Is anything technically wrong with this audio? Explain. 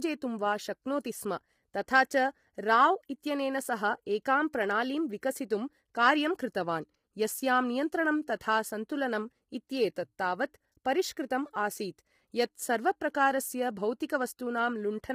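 Yes. Throughout the speech there's heavy low-delay AAC compression: it sounds rough and grainy, with noise filling between the harmonics and a thin, synthetic top end. That's likely AAC-ELD, whose short frames blur pitch harmonics, starved at something like 24 kbps.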